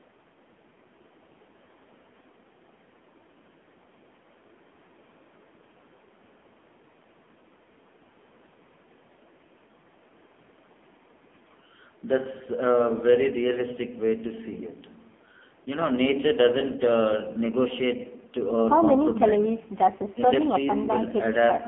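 From start to finish the speech sounds buzzy, thin and synthetic, with nothing above about 3.8 kHz. This is AMR narrowband mobile codec damage: the vocal-tract model, starved of bits, rebuilds the voice crudely, which points to one of the lowest AMR-NB rates, near 6 kbps.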